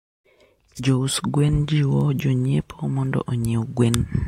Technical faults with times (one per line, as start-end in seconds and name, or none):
0.95-4.12 word clock ticks